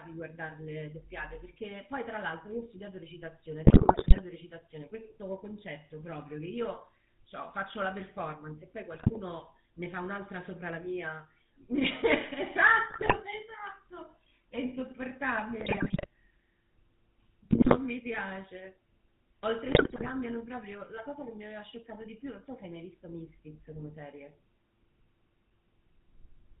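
Speech carries a buzzy, gravelly roughness from start to finish, with nothing present above 4 kHz, the plainly audible signature of the GSM full-rate codec. That coder rebuilds the voice from a vocal-tract model excited by regularly spaced pulses, discarding two of every three excitation samples, and the resulting coarse, band-limited texture fits its 13 kbps rate. On top of this, the voice breaks into squawks, pops and gargling in six short bursts: 3.65–4.21 s, 8.94–9.20 s, 12.9–13.14 s, 15.6–16.06 s, 17.50–17.77 s and 19.66–20.11 s. These are GSM bit errors. Corrupted bits reaching the decoder scramble the filter, pitch and gain parameters, warping the spectrum or spiking the level frame by frame. The error density is high, roughly 3 to 6 percent of bits, enough to wreck a run of consecutive frames in each burst.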